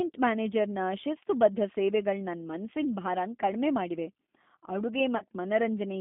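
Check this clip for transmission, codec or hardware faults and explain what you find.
Two faults are audible: a low-bitrate speech codec throughout, and one concealed packet loss near the end.

Throughout, the speech sounds rough, slightly synthetic and boxed into roughly 200 Hz to 3.5 kHz. This is the G.729 codec, whose model-based rebuild fits an 8 kbit/s G.729A stream.

From 5.17 to 5.24 s there is a brief smear that fades and recovers. This is VoIP packet loss concealed by the speech codec: about 30 ms went missing, which fits a single lost packet, and the decoder extrapolated over the gap.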